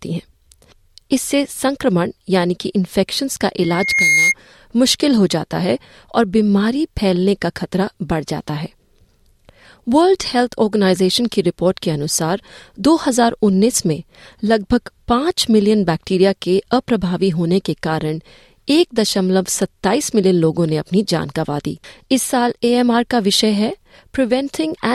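From 3.62 to 4.35 s a 2.1 kHz tone swells within about 0.4 s to a squeal louder than the speech: loudspeaker feedback, where the microphone re-amplified its own loudspeaker.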